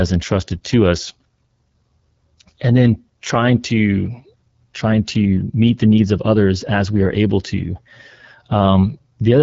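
Speech coded throughout with the AMR wideband (HD Voice) codec at a low rate, roughness and rasp pointing to about 8.85 kbit/s. The model-driven coding smears harmonics, and a spectrogram shows a blurred upper band filled with noise, with nothing above 7.6 kHz.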